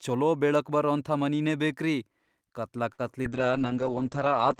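At 2.93 to 3.01 s there is a short stall from a late packet: the jitter buffer ran dry, and about 53 ms of the last sound was stretched until the packet arrived. Nothing is lost, which separates it from packet loss; the sound simply holds and then resumes 53 ms later.

At 3.23 to 3.26 s a short concealed packet loss follows. About 20 ms of audio never arrived, and roughly 15 ms of it was patched by extrapolating the preceding sound, leaving a brief smear. Unlike the stall, material is actually missing, not just delayed.

From 3.33 s to the end comes a call bitrate drop, from 32 to 8 kbps and staying at the lowest rate for about 1.1 s. The encoder codes more coarsely and cuts audio bandwidth from 20 kHz to 8 kHz, so the speech turns muffled and rough. This is a sustained change of tone, not a momentary glitch.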